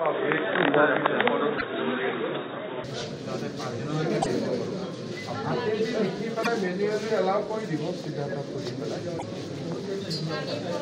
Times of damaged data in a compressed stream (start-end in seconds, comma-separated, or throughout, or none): 1.55-1.62, 4.19-4.26, 6.40-6.47, 9.16-9.23